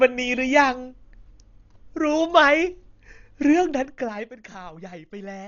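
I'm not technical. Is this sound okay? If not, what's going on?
No. Throughout, the speech sounds dull and muffled, with a rough, fluttery edge. That's most likely heavy Dolby Digital compression, squeezed so hard it drops the highs and fills gaps with hiss.

From 3.53 to 4.55 s, while the volume drops a lot, you'll hear a ticking zipper noise. The fade happens in small jumps, about ten a second, instead of gliding, and each jump clicks.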